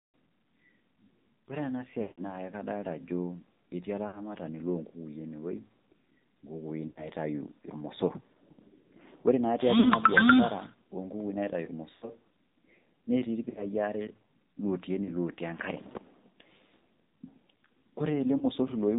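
Speech coded with the AMR narrowband mobile codec at 7.4 kbps sounds band-limited to 4 kHz, buzzy and synthetic. Lost AMR speech frames cause brief warbling, fading holds at 2.0, 4.1, 6.9, 9.8, 11.9, 13.5, 15.0 and 18.4 s. The longest, at 2.0 s, runs about 160 ms.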